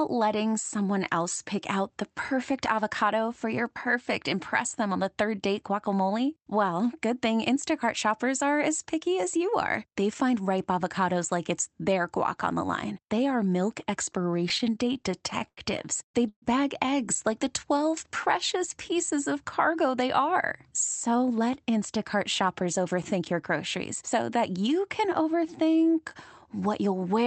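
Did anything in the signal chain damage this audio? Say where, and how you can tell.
Yes, and the damage comes from the network and jitter-buffer stage of a call path.

Repeated stalls (stutter) run from 14.13 to 15.59 s, starting just after "are milk". The sound hitches 15 times, with about 222 ms of stretched continuation in total and the longest hold lasting 89 ms. Packets were arriving late or too slowly, so the jitter buffer kept running dry. Each time, the receiver extended the last sound until data arrived. Nothing is lost, but the passage drags and jerks.

A call audio freeze sits at 16.29 to 16.44 s, just before "eggs like". The last sound is held as a fading buzz or hiss for about 130 ms, ending in roughly 60 ms of silence, and then the audio resumes where it stopped. This was likely caused by packets held up in transit that emptied the buffer. The playout delay grows by 130 ms, so a gap is inserted but nothing is missing.

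A jitter buffer slow-down runs from 17.44 to 17.91 s, between "eggs like" and "precious pieces of cargo". Playback drops to 93% speed at unchanged pitch, and about 40 ms of repeated pitch periods are added. The buffer, running low, rebuilt its reserve by duplicating single cycles. This gives drawn-out sounds.

Jitter buffer speed-up occurs twice. From 21.08 to 23.32 s, playback runs at 105% speed with roughly 150 ms trimmed. From 25.68 to 25.99 s, it runs at 112% with about 50 ms removed. In both cases the buffer held more audio than its target. It cut short pitch-period pieces to reduce the delay, so the sound is hurried at the same pitch.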